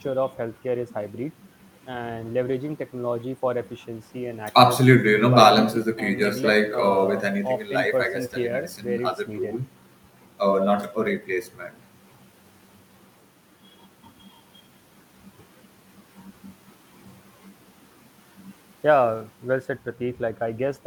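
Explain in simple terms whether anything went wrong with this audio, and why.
Nothing went wrong here; the speech comes across steady and unbroken the whole way, with no dropouts, glitches or odd sounds to point to.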